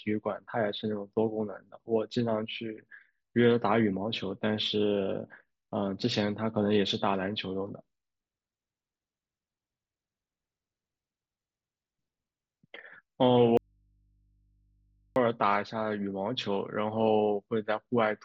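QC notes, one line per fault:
13.57–15.16 s, audio dropout to a faint residue: the speech cuts off abruptly for about 1.59 s, leaving only mains hum about 40 dB down, then returns mid-flow. The likely cause is the signal breaking while the path after the break stayed live.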